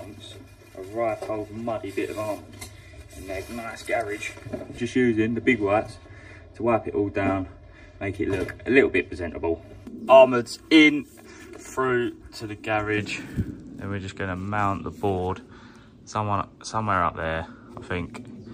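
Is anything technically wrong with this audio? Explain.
Yes. Channel delay (comb filtering), 0.0 to 12.98 s: one channel lags about 3 ms, so mono summing notches evenly spaced frequencies from around 150 Hz, sounding hollow.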